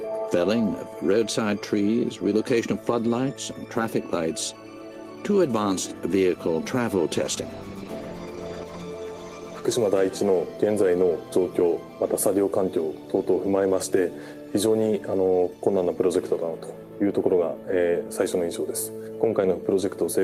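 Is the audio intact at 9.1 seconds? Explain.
No. A call bitrate drop runs from 7.16 to 9.85 s. The sound fits a fall from 40 to 15 kbps after the call's bandwidth estimate dropped. The encoder codes coarsely and trims high frequencies, so it turns rough, watery or muffled.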